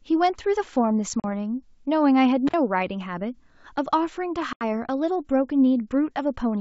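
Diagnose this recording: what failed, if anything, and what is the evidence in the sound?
Network stage: packet loss on an ADPCM call, twice. There are hard-edged silent holes at 1.20–1.25 s (40 ms lost) and 4.53–4.64 s (80 ms, several packets). The G.722 decoder's predictor and step size lose sync with the sender, so speech comes back slightly distorted before settling.

Analogue wiring: an intermittent contact at 2.47–2.54 s. The line opens for about 49 ms, so the signal drops out with crackle on both edges and faint hiss underneath. That points to a loose plug or cable briefly breaking the connection, not to anything digital.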